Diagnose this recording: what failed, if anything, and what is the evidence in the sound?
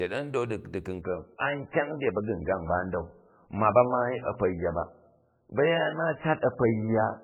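The network stage failed: an adaptive stream at a lower bitrate. At 1.01 s the speech abruptly turns dull, with nothing above 3 kHz, and stays so to the end. There is no gap. This fits a switch from 128 kbit/s MP3 down to 8 kbit/s.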